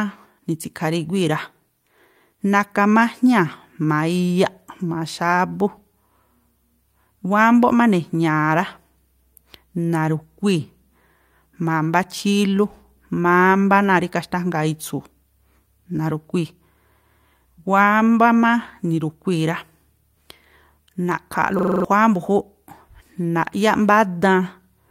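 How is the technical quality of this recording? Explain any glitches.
A single glitch stands out, near the end of the speech. From 21.59 s to 21.85 s a system hang loop occurs: the computer stalled while the audio hardware kept replaying its ring buffer, so one 42.67 ms slice, which fits a 2048-sample buffer, repeats six times, a stutter at 23.4 Hz. About a third of a second of audio is lost. A waveform shows identical blocks side by side, and a spectrogram shows vertical seams 42.67 ms apart.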